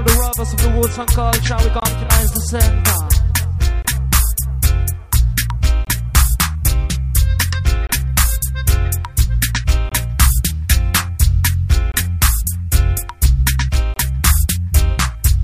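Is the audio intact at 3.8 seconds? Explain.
No. There is a gap between chunks from 3.82 to 3.85 seconds. It is a hole of about 23 ms. The audio was delivered in 2-second chunks, and silence was inserted at this join rather than sound being lost. The likely cause is codec padding or a player starting the next chunk late. It is heard as a brief dropout, a short hole or dip in the sound.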